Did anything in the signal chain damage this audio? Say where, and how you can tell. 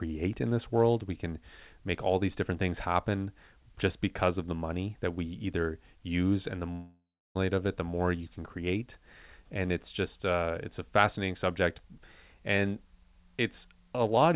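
Yes, at the network stage, likely a long network dropout. From 6.72 s the last sound is stretched into a fading buzz or hiss, with about 0.31 s of silence, and at 7.37 s it picks up again with roughly 0.64 s simply gone. The G.711 call path, with nothing above 4 kHz, sits under all of it.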